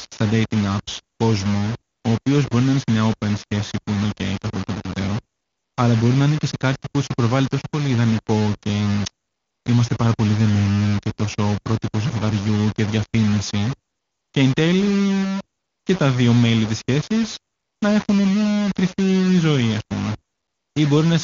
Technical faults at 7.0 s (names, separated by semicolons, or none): low bit depth without dither